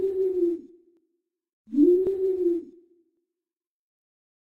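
Clock drift buffer slips from 0.97 to 4.27 s: about four regular clicks every 1.1 s, likely from mismatched device clocks dropping or repeating small sample blocks.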